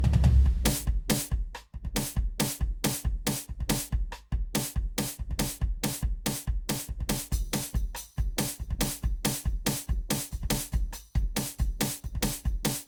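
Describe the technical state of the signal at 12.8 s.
At 12.8 s the music is still carrying generation loss, as it does across the whole clip. The likely cause is repeated lossy coding: the material seems to have been decoded and re-encoded around seven times, in a way that fits an Opus chain near 64 kbit/s, each pass quantising again on a shifted frame grid. The errors stack, so the sound turns swirly and hollow, with smeared attacks, although content still reaches up to about 20.2 kHz.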